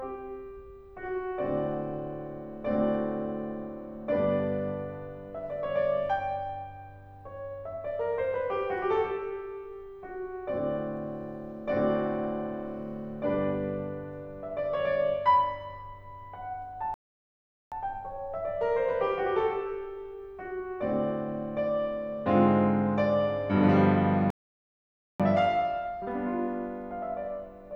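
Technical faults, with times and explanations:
16.94 to 17.72 s and 24.30 to 25.20 s, playback stall: the music cuts out mid-flow and falls silent for about 0.78 s, then about 0.89 s, before resuming. The player likely ran short of data or had its thread blocked, so output stopped until it recovered.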